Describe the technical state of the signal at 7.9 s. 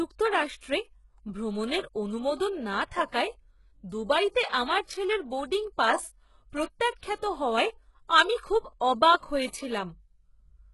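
At 7.9 s, as throughout the speech, the treble sounds gritty and metallic, with s sounds lispy and nothing above 11.5 kHz. The likely cause is heavy HE-AAC compression at a very low rate, fitting about 12 kbps, where band replication copies lower bands upward. Plain low-pass dullness would lose the treble outright instead.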